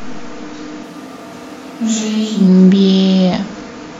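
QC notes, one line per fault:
0.85–2.46 s, switch to a distant microphone: the speech abruptly turns roomy and hollow with thinner bass, drops roughly 5 dB, and room noise comes up to around 25 dB below the speech, likely because the close mic dropped out and a farther pickup took over.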